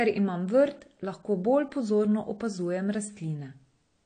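Speech with plainly audible AAC compression throughout: nothing remains above 9 kHz and the band below sounds dull and smeared, likely from low-rate AAC-LC coding, which fits about 32 kbps.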